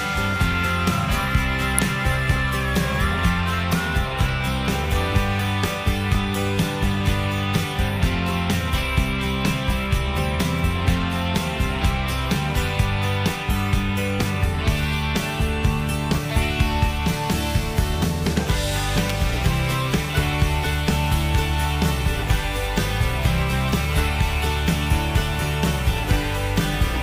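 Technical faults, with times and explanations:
1.79 s and 19.10 s, electrical switching spike: A sharp snap sits on top of the sound at each point. Each is a brief burst peaking around -5 dBFS. It is likely a nearby switch or motor arcing, with the audio line picking up that discharge.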